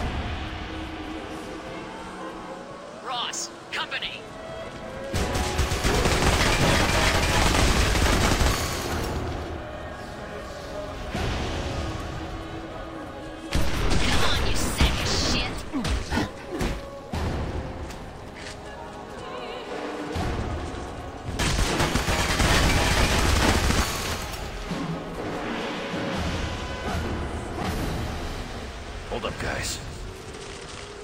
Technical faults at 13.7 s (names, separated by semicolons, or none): repeated buffer